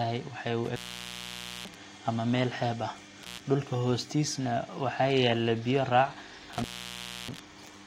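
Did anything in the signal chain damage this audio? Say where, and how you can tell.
Yes, in the analogue wiring. The speech breaks off three times, crackling where it cuts out and returns: 0.65 to 1.76 s, open for about 0.89 s before "ama meel xeeb"; 3.22 to 3.41 s, open for 0.11 s; and 6.53 to 7.39 s, open for 0.64 s. This is intermittent contact. A loose plug or cable momentarily loses its connection, and the signal path opens and recloses at irregular lengths rather than on any fixed digital timing.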